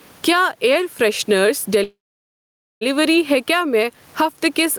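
From the start and throughout the clip there is gain pumping. The low background sits about 42 dB under the speech, and the gain swings by around 15 dB. This points to input gain set far too high with a fast limiter or compressor likely clamping it, leaving loud and soft passages squashed together. A noise gate would cut the background to silence in the gaps.

At 1.83 s the speech stops and the last sound is stretched into a short decaying tail that falls to silence for about 0.86 s, with the whole interruption lasting until 2.83 s. This is a call audio freeze, likely caused by packets being held up in transit until the jitter buffer ran empty. The speech picks up exactly where it left off, so nothing is lost. It simply arrives about 0.98 s late. A packet-loss dropout would instead skip part of the speech and resume further along.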